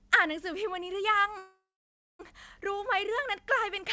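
A call audio freeze runs from 1.38 s to 2.21 s in this speech, and its likely cause is packets held up in transit until the jitter buffer ran dry. The receiver extends the last sound as a brief fading buzz or hiss, then falls silent for about 0.58 s of the 0.81 s gap. When the packets arrive, the speech picks up where it stopped with nothing lost, just 0.81 s later than before, over a G.722 call path with nothing above 8 kHz.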